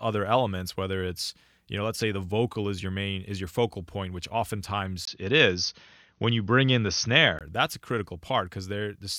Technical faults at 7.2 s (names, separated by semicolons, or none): input switched to a poorer device